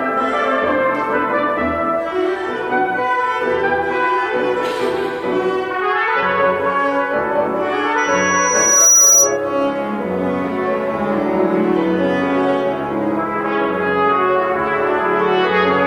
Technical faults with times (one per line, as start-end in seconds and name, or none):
7.97-9.37 loudspeaker feedback squeal